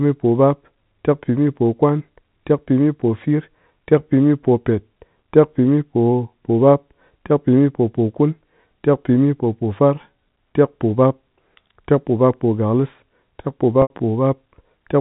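Packet loss with pitch repetition, 13.82 to 13.90 s: 80 ms went missing and the receiver looped the last pitch period, giving a brief, buzzy, held tone that fades into silence before the speech returns with a short cross-fade.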